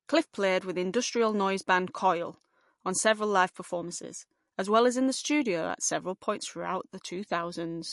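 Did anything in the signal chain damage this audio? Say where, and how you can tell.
Yes, at the codec stage, throughout. The speech has no content above 11.3 kHz and sounds watery and swirly, which likely points to MP3 compression at a low bitrate around 48 kbps. A plain low-pass filter would dull the treble without this flickering, frame-to-frame warble.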